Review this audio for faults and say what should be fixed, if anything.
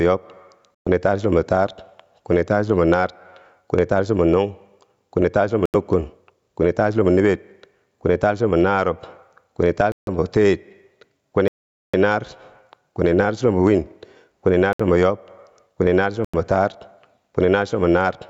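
The speech has gain pumping throughout, with a swing of about 10 dB. Loud and quiet passages sit unnaturally close in level, and the sound is squashed. The likely cause is microphone gain set far too high, with a fast limiter or compressor pulling it back on each peak. To prevent it, lower the input gain so the limiter rarely has to act.

There are six Bluetooth stalls. The sound drops to silence and then resumes where it left off or slightly later. They occur at 0.75 s (about 110 ms, just before "taar chulombo"), at 5.66 s (83 ms, just after "kwini taar chulombo"), at 9.92 s (152 ms), at 11.48 s (455 ms, the longest), at 14.73 s (65 ms, between "naar chulombo win kwini" and "yob kwini naar") and at 16.25 s (90 ms). The likely cause is radio interference holding up packets, so the headphones' buffer ran dry until the resent audio arrived. To prevent it, reduce interference or use a wired connection.

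The call microphone processing removes everything above 8 kHz as expected.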